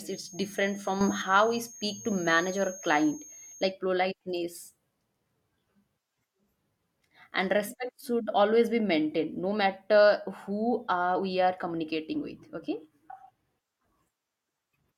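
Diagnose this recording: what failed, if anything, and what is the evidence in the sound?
Feedback whistle, 0.0 to 3.74 s. A thin, steady tone at 6.5 kHz sits behind the speech, roughly 20 dB below it, swelling and fading slowly in level before it stops. The likely cause is an acoustic loop in the capture path: sound from a loudspeaker reaches the microphone and is amplified back out, with loop gain just under the point of runaway, so a single high frequency keeps ringing instead of building up.

Sudden gain jump, 1.01 to 1.22 s. For about 0.2 s the speech and the background noise rise together by about 9 dB, with no fade in or out at either edge. Because the noise floor moves with the speech, this is a change in gain rather than in the source. It likely comes from a digital gain change in the call-processing stage, where a new setting or bit shift was applied from one sample to the next without a ramp.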